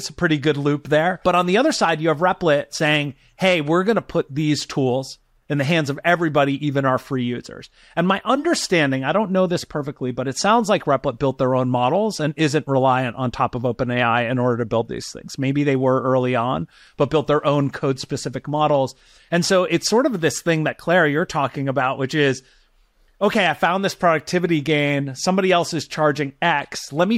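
A recording of speech, with no technical fault to be heard anywhere in it. Nothing in the audio calls for a time, a value or a cause.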